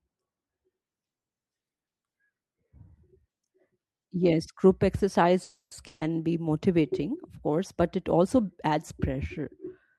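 At 5.43 s a call audio freeze begins and lasts until 5.73 s. The last sound is stretched into a fading buzz or hiss that ends in about 80 ms of silence, then playback resumes where it left off, roughly 280 ms late with nothing lost. This is likely a delivery stall that drained the jitter buffer. From 5.87 to 6.03 s, just before "be motivating of course", a burst of packet loss removes about 140 ms. The receiver bridges it by continuing the last sound and fading it down, and the audio picks up further on with that stretch missing. The Opus call path limits the band to about 12 kHz throughout.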